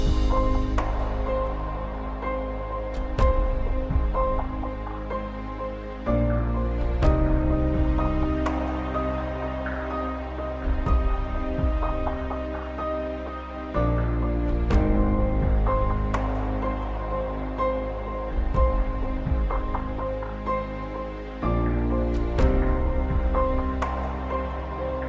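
Nothing technically wrong turns up anywhere in this audio, so there's no problem to point to and no cause to trace.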